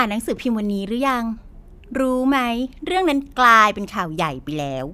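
No technical faults are audible.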